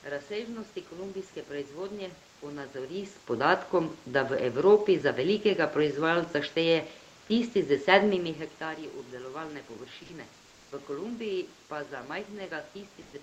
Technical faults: sound dropped by the voice detector; comfort noise in place of the background

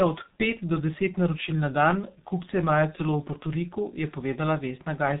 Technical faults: G.723.1 codec

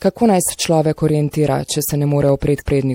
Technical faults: MP3 compression

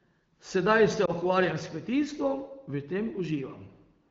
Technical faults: lost AMR speech frames

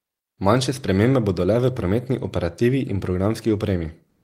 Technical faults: comfort noise in place of the background

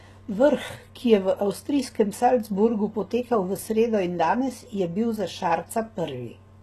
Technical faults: HE-AAC compression

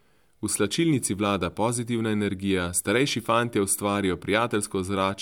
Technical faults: none

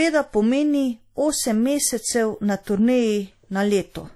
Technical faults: WMA compression

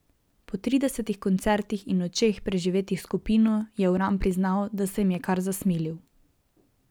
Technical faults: clock drift buffer slips

